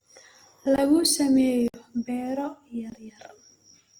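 Throughout the speech there is a rough, grainy texture: consonants and vowels sound noisy rather than clean, and the damage is plainly audible even though the bandwidth stays full, with content reaching to about 20.2 kHz. This is likely Opus compression in its music-oriented mode, at a low rate that fits roughly 24 kbps. Rather than leaving holes, the encoder keeps each band's energy and fills starved bands with noise or folded copies of lower bands, which produces the grain.

At 0.76 s the sound drops out for 20 ms, at 1.68 s for a longer 60 ms, and at 2.90 s for another 20 ms. Each gap cuts out and back abruptly because the signal jumps straight to digital silence and back with no fade. The 60 ms one comes across as a brief hole. These are blocks of digital silence, where stretches of samples were replaced with zeros, typically when output buffers were not filled in time.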